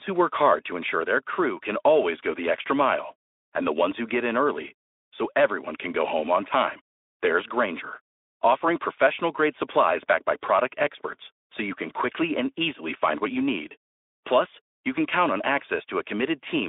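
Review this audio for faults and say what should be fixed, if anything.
Nothing here needs fixing, since no faults turn up anywhere in the recording. The speech comes through a Speex link held to a telephone band of about 300 Hz to 3.6 kHz, with nothing above 3.8 kHz, which fits a setting around 15 kbps.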